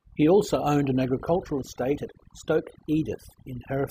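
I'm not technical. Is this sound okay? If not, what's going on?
No. The whole recording suffers from overdone noise removal. Someone used a cleanup tool to strip out background noise, but set it far too strong. It shuts off parts of the sound whenever they resemble the noise. The quieter parts of the speech get cut along with it. So the gaps between words sound nearly dead, with twinkling specks.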